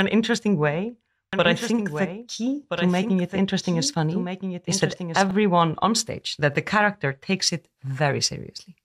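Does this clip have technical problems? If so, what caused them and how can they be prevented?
Yes. A doubled audio track runs from 1.33 to 5.31 s. The likely cause is that the same speech entered the mix twice, either captured again through a slower path or held as two out-of-step copies by an edit. The result is a full-band copy trailing about one and a half seconds behind, around 10 dB quieter, with no decay or room colour, appearing and vanishing abruptly at those times. To prevent it, route each source through a single capture path and check edits for overlapping duplicate regions.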